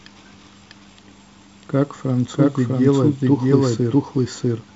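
Throughout the speech, every phrase returns a second time about 0.7 s later, at roughly the same loudness and with no decay or room colour. This doubled audio track is likely the same signal captured twice, with the second copy arriving late, heard through a light wideband telephone band consistent with G.722 at a reduced rate.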